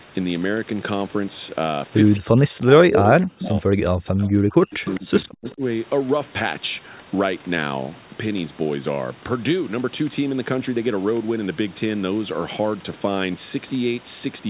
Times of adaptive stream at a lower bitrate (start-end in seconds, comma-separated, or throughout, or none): none